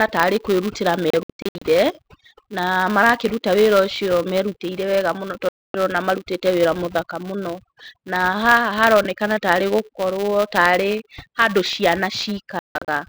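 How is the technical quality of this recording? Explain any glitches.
The technical quality is poor: heavy processing artefacts run through the whole speech recording, and three short signal dropouts break it up.

Overdone noise removal is present throughout. The noise reducer was set so aggressively that any frequency band near its noise estimate was pushed far down, taking the quieter parts of the voice with it. The pauses fall to near silence with twinkling specks. On a spectrogram, the background becomes dark with isolated bright dots, and the speech harmonics look patchy and eaten away.

A filter restarted on every block also runs throughout. Because the filter loses its state at each block boundary, every block begins with a small transient. Together these form a 200 Hz buzz whose loudness follows the speech level. On a spectrogram it shows as a steady line at 200 Hz with harmonics above it. 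In the waveform it appears as regularly spaced small spikes, 5 ms apart.

There are three digital broadcast dropouts. From 1.10 to 1.62 s the sound is cut by several short holes, the longest about 64 ms. At 5.49 to 5.75 s there is a single muted gap. From 12.59 to 12.88 s there are scattered holes, the longest about 0.16 s. The receiver lost valid frames and muted until good ones returned, so that audio is gone. The lengths of the holes fit frames of roughly 32 ms. In the waveform and spectrogram these show as flat, near-silent gaps.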